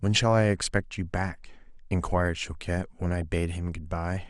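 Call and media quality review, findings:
MP2 compression, throughout. Speech dull and band-limited, upper range switching in and out, granular gurgle. Likely cause: MPEG Layer II encoder starved of bits, dropping whole upper sub-bands and quantising the remaining ones coarsely. Damage plainly audible, consistent with roughly 80 kbps. Component: encoder stage.

DAB burbling, 3.22 s. Brief burst of noise blips in single sub-bands riding over the speech. Mechanism: bit errors escaping error correction into the MP2 stream, corrupting samples and scale factors. Damage hits five frames, consistent with a bit error rate of a fraction of a percent. Component: DAB reception and demodulation path.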